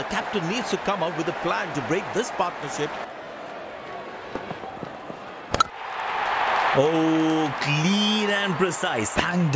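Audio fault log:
2.2–8.5 s, resampler restarted on every block: a steady 10 Hz ticking rides on the signal, because each 100 ms block was converted separately, leaving small errors at its edges.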